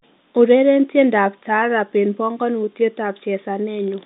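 No faults are audible in this telephone-band speech.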